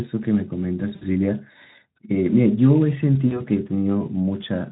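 At 0.95 s and again at 3.27 s, VoIP packet loss concealed by the speech codec: 60 ms and 40 ms gaps, consistent with three and two lost 20 ms Speex frames, are bridged by extrapolated speech that turns buzzy or noisy, fades, and stays weak until about 1.04 s and 3.41 s.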